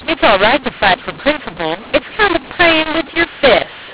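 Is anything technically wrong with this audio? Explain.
Yes. Throughout, the speech sounds harsh and distorted and the pauses hiss. This is a mu-law and A-law mix-up: the telephone audio was coded as mu-law but decoded as A-law, which scrambles sample levels and lifts near-silence into noise. The band-limiting to 4 kHz comes from the G.711 telephone coding itself.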